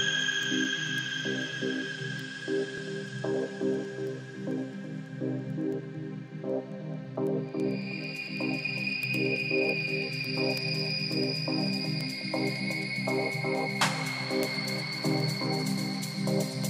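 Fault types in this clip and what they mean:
Word clock ticks: the receiving device runs on its own clock instead of locking to the digital source, so sample timing drifts and a sample is slipped at each crossover, which fits a clock error of around 200 ppm. Sharp, uneven ticks repeat about every tenth of a second from 0.21 s to 16.64 s.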